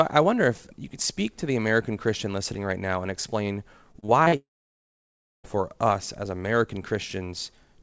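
Speech that has passed through a wideband call link, with nothing above 8 kHz, which fits a G.722 codec at 64 kbps. From 3.92 to 4.34 s there is repeated packet loss (robotic sound): five short holes, the longest 38 ms, patched by repeating the last sound. About 120 ms, or 29% of that stretch, is concealed, so the speech turns choppy. A spectrogram shows smeared, repeated harmonic bands broken by small notches. From 4.36 to 5.46 s the audio drops out for about 1.1 s, likely a long network dropout. A brief fading continuation of the last sound gives way to roughly 980 ms of silence, which appears as a flat stretch in the waveform and a blank band in the spectrogram before the speech resumes with that part missing.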